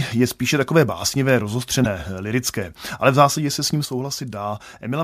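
At 1.82 to 1.86 s, between "je spíše takové básnivé" and "lirické ale v zásadě", there is damaged data in the compressed stream. The decoder misreads the corrupted frames, loses sync and resumes at the next valid header, producing a brief disruption about 40 ms long.

At 3.85 s, just after "zásadě se s ním", a sudden gain jump drops the speech and background noise together by about 6 dB, and the lower level holds to the end. The likely cause is a digital gain setting applied instantly rather than ramped.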